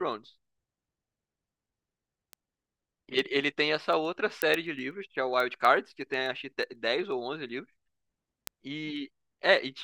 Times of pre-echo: none

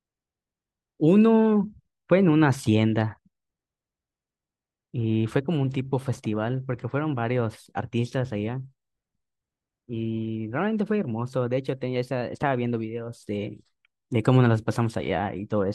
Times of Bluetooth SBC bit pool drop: none

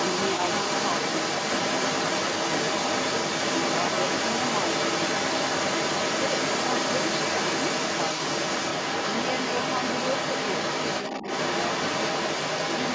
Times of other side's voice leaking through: 0.00-12.95

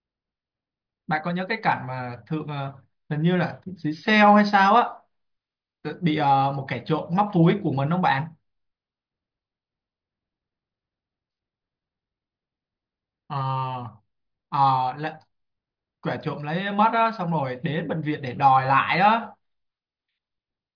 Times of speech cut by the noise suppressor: none

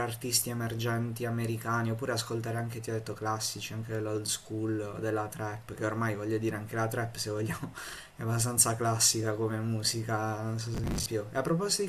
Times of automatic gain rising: none

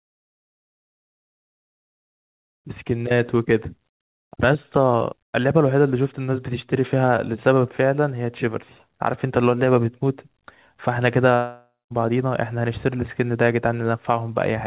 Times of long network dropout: 11.35-11.92

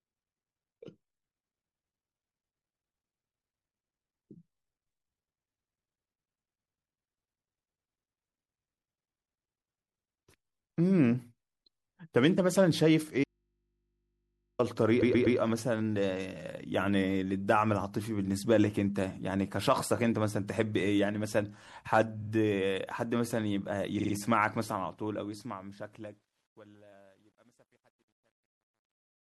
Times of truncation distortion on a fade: 24.69-29.29

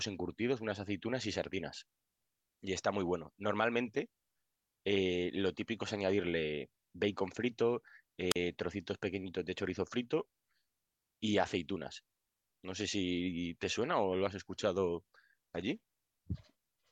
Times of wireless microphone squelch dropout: 8.30-8.36

